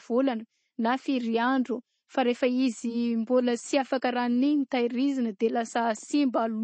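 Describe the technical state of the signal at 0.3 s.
At 0.3 s the speech shows plainly audible MP3 compression, present throughout: a hard ceiling at 8.3 kHz, dull sibilants and a watery swirl, which fits a low bitrate near 32 kbps. A spectrogram likely shows blank space above 8.3 kHz and flickering, patchy detail below.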